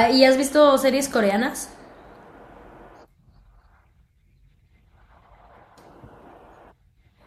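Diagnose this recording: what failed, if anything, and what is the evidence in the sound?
Nothing failed in this recording, and the sound gives no evidence of a fault at any stage.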